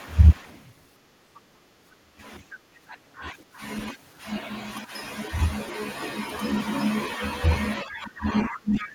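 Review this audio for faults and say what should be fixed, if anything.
Other side's voice leaking through appears at 1.35–1.41 s, 3.38–3.44 s and 8.82–8.86 s. These are brief scraps. They sit about 25 to 30 dB below the speech, and about 15 dB below near the end. This is likely residual loudspeaker echo that the canceller missed. Stronger echo cancellation, or a headset, would prevent it.

Speech suppressed in double talk occurs at 2.0–2.22 s, 2.69–2.97 s, and from 7.82 s to the end. The voice drops by roughly 25 dB, 15 dB and 25 dB. This is likely the canceller ducking the talker along with the echo. A canceller with better double-talk detection would prevent it.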